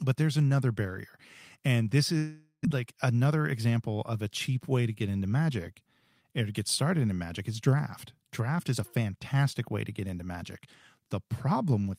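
A speech clip with two network faults. Just after "another barrier and this", at 2.17 s, the sound stops being real speech. The receiver stretches the last sound into a buzz that fades. A short stretch of silence follows. Real audio returns at 2.67 s. About 400 ms of speech never plays. The likely cause is a long network dropout, where no packets arrived. The stream also comes back roughly 50 ms later than before. Then a jitter buffer speed-up runs from 3.25 s to 3.72 s, ending just before "of a cheap way". Here the buffer held more audio than it aims for. To catch up, the receiver cut tiny pitch-period slices many times in a row. About 70 ms was removed in total. Speech plays at 111% speed with unchanged pitch. It sounds briefly hurried.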